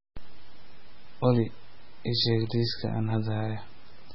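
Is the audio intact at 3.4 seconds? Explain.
No. At 3.4 s, as across the whole clip, the speech has nothing above 5.6 kHz and sounds heavily watery and swirly, with smeared attacks. This is likely MP3 compression at a very low bitrate, which fits about 16 kbps, where the encoder cuts the treble and drops weak frequency lines.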